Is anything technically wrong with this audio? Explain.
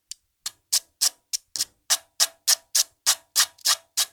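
Yes. There is a repeated buffer at 1.55 s: new audio arrived late, so a piece about 1.5 ms long, which fits a 64-sample buffer, replayed three extra times, heard as a brief click or buzz.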